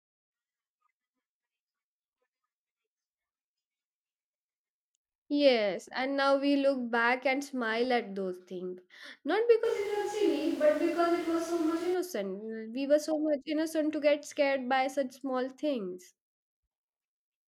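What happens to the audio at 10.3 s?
A switch to a distant microphone runs from 9.66 to 11.93 s, most likely because the close mic dropped out. The speech turns suddenly roomy and hollow, thinner in the bass, at much the same level, with room noise roughly 20 dB below it.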